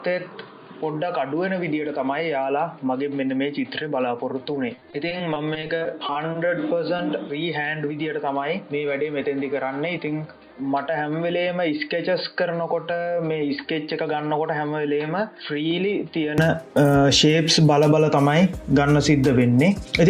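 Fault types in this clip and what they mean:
input switched to a poorer device: From the start until 16.38 s the sound is dull and narrow, with nothing above 4.7 kHz, about 5 dB quieter, and a faint noise floor roughly 50 dB down. It then clears without any gap, likely because recording moved off a lower-quality microphone or headset profile.
repeated packet loss (robotic sound): Between 4.75 and 6.37 s the sound turns choppy and robotic, broken by a dozen or so dropouts of up to 20 ms each. Roughly a seventh of that stretch is guesswork, where lost audio was patched by extending what came before.
short concealed packet loss: At 6.97 to 7.01 s there is a brief smear or wobble where about 20 ms of audio never arrived in time. The receiver filled the hole by continuing the preceding sound, then blended back into the real signal.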